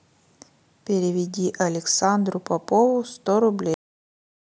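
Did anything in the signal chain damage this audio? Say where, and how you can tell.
Yes. At 3.74 s the speech stops dead in the middle of a sound, and flat digital silence with no decay runs to the end. That is a cut-off end from the buffer or storage stage: the final buffers were never written out.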